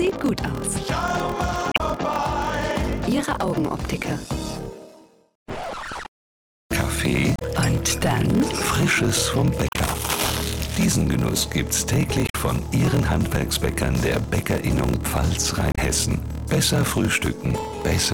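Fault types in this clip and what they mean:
Block size mismatch (padded): blocks that fit 1024 samples get zero-filled to a longer read, causing a steady 41.7 Hz buzz and 0.889 speed, timbre unchanged.
Damaged data in a compressed stream: corrupt frames knock the decoder out of sync, giving short chirps or blips at 1.72, 7.36, 9.66, 12.26 and 15.72 s.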